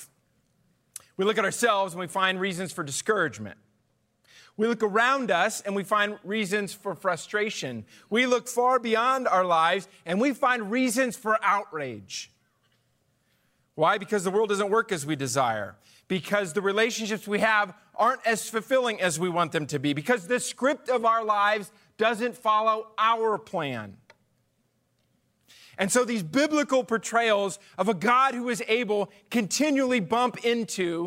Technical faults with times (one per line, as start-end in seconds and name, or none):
2.36-4.86 channel delay (comb filtering)